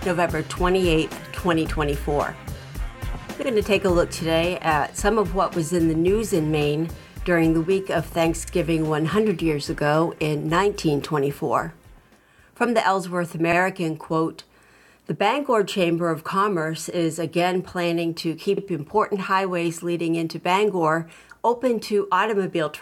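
At 3.42, 8.47, 13.52 and 18.57 s, overlapping chunks cause a brief stutter. The audio was handled in 5-second blocks, and each block began 50 ms before the previous one ended, so that 50 ms slice plays twice at every join. It sounds like a click or hiccup at a steady rhythm. On a waveform, each join shows a short repeated segment with a discontinuity at its edge. A spectrogram shows a thin vertical stripe every 5 s.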